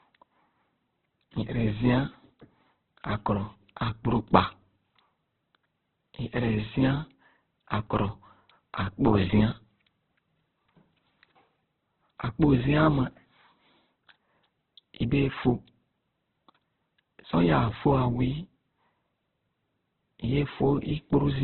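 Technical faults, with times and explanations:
Throughout, Opus compression: the speech sounds rough, grainy and boxed-in, with nothing above 4.2 kHz. This is likely Opus in its music mode at a starved rate. The grain and edge fit a very low bitrate near 8 kbps, where band energies are kept but their fine detail is filled with noise or copied from lower bands. On a spectrogram the energy stops at a flat ceiling near 4.2 kHz, and harmonics below it look smeared and speckled rather than cleanly striated.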